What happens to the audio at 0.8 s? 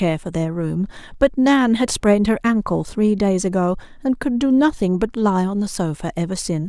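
At 0.8 s the speech lies within a steady series of faint clicks roughly every third of a second, about twenty in all, from 0.12 s to 6.42 s. These are clock slip clicks, likely from two devices running on separate, unsynchronised clocks. A clock error of around 150 ppm builds up to a whole sample at that regular interval, so a single sample is dropped or repeated each time.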